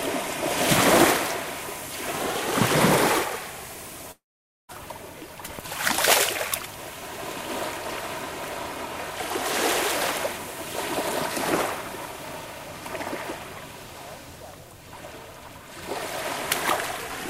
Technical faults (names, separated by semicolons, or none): long network dropout